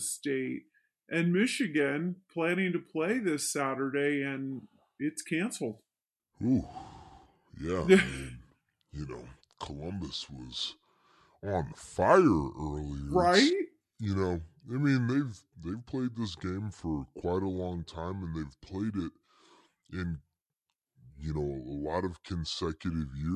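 Speech plays low and slow for the whole clip, a wrong sample rate fault: speed drops to about 0.73 times and pitch about 5.5 semitones, which fits 44.1 kHz audio played at 32 kHz. A spectrogram shows harmonics and formants shifted down, and the waveform looks stretched in time.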